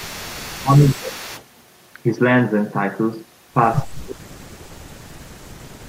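Echo leak runs from 0.00 to 1.44 s at the start of this speech recording: a faint copy of the talker returns about 0.3 s behind the original, roughly 20 dB below it. The likely cause is a far end on a loudspeaker whose echo canceller failed to strip out what its microphone picked up, so that residue was sent back down the line. Speech suppressed in double talk appears at 0.47 to 1.26 s, 4.04 to 4.78 s and 5.05 to 5.55 s. In each stretch the voice sinks or breaks up for roughly half a second to 0.7 s. The first dip is mild, around 15 dB. The later two go much deeper, some 30 to 35 dB, almost cutting the voice out. This likely comes from the echo canceller treating overlapping talk as echo and turning the talker down along with it.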